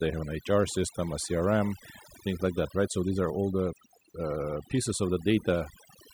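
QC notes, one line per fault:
Throughout, overdone noise removal: the noise reduction was pushed too hard on this speech, so individual frequency bands sitting near the noise floor get dragged right down or switched off. The background drops and breaks up into little twinkling specks, and the quieter parts of the voice vanish along with it.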